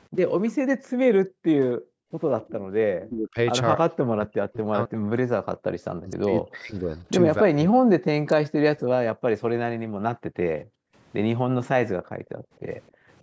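Right at the start, from 0.46 to 0.51 s, there's a faint ghost of the speech trailing about 263 ms behind, around 30 dB down. That's most likely an echo leak: the far end is on a loudspeaker and its echo canceller didn't fully scrub what its mic heard, so a scrap got sent back. It returns from 3.02 to 3.09 s, same 263 ms lag, a bit louder at about 25 dB down.

Between 0.62 and 2.64 s the room tone keeps ducking out, totalling about a second of dips that go as deep as about 40 dB. That's background gated by the echo canceller. While the loudspeaker was playing, the canceller clamped the mic hard, and the ambience only comes back once it lets go. The same thing happens at 9.87 to 10.96 s and 11.99 to 13.09 s, each with about 0.7 s of gaps reaching about 40 dB.

From 3.05 to 8.44 s the speech itself keeps sinking, adding up to roughly four seconds of very deep dips. That's likely speech suppressed in double talk. 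Both ends were talking at once, and the canceller couldn't tell the local talker from the loudspeaker echo, so it turned everything down. Through all of this the call's mic processing is doing its normal job, and nothing is heard above 8 kHz.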